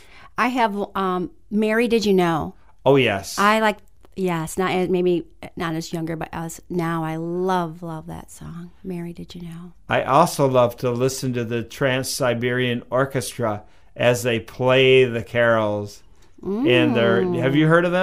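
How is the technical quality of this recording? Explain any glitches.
No glitches or faults are audible.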